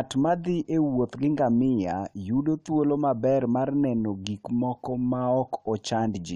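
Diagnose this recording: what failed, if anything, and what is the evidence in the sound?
Nothing failed; no stage shows any audible fault here.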